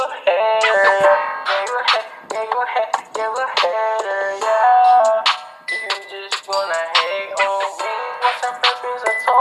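From 1.6 to 6.08 s the audio coarsens, roughest for 1.92 s. This is a call bitrate drop, consistent with the encoder falling from 96 to 28 kbps.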